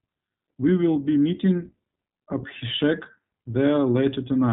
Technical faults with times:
0.00-4.52 iLBC codec

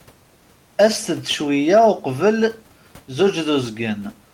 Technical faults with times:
none

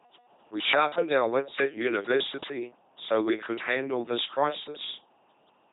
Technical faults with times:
0.00-5.73 LPC-10 vocoder

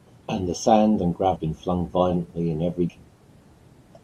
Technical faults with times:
1.36 compressed frames skipped
2.89 compressed frames skipped

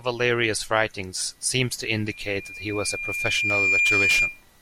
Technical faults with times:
2.06-4.44 loudspeaker feedback squeal

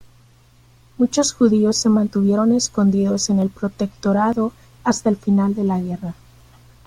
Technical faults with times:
3.42 dropped buffer (overrun)
4.33 dropped buffer (overrun)

